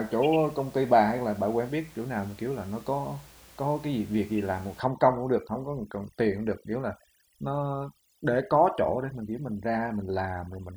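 From about 4.8 s right through to the end, you get overdone noise removal. The noise reducer's cranked too hard, so any frequency band sitting close to its idea of the room noise gets pulled way down or switched off, and the softer bits of the voice go with it. The background, which sat about 26 dB under the speech before, drops away and breaks up into little twinkly specks.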